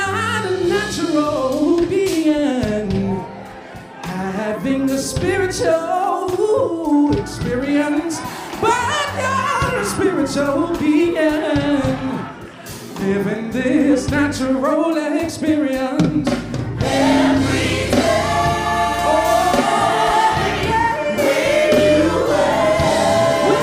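Listening through, nothing stood out as a technical fault at any point.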